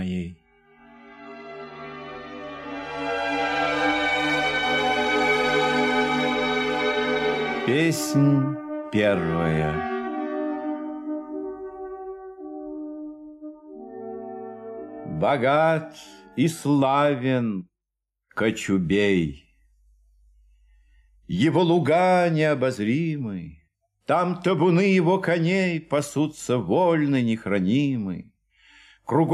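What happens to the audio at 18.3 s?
Nothing goes wrong at 18.3 s; the audio plays through that moment intact, with no dropout, click or distortion.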